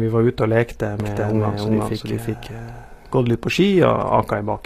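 Across the whole clip the speech has plainly audible codec damage: its s sounds come out gritty, metallic or lispy, and nothing is present above 14.9 kHz. This is likely HE-AAC compression at a low bitrate, around 24 kbps. The codec keeps only the lower spectrum and synthesises the treble by copying lower bands upward under a coarse envelope. The rebuilt harmonics don't line up with the real ones.

From 1.00 s to 3.30 s a second, identical copy of the speech runs roughly 0.4 s behind the first, at about the same level. It cuts in and out abruptly, with no decay or room colouring. This is likely a doubled audio track, where the same audio was mixed in twice, either captured again by a slower path or left out of step by an edit.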